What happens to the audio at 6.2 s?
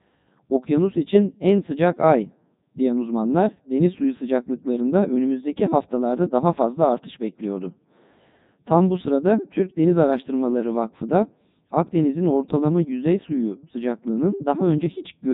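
At 6.2 s the speech is still passing through the Codec 2 vocoder, which runs through the whole clip. It rebuilds speech from pitch, energy and spectral envelope alone, consistent with its 3.2 kbit/s mode, leaving the sound heavily robotic and buzzy.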